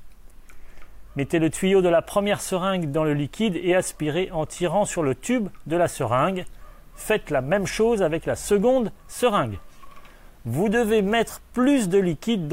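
No technical faults can be heard anywhere in the recording; the signal stays steady and intact throughout.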